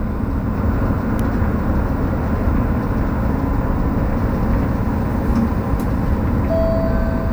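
Nothing in this recording of everyday sounds stands out as a technical fault, so there's nothing to flag here.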